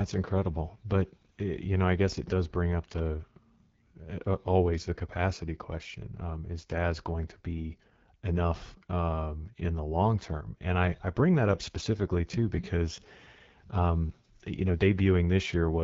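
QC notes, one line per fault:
throughout: AMR wideband (HD Voice) codec. The speech sounds rough and raspy, with plainly audible coding damage, and the 6.4 to 7 kHz band holds shaped noise rather than real detail. This fits AMR-WB at its second-lowest rate, around 8.85 kbit/s.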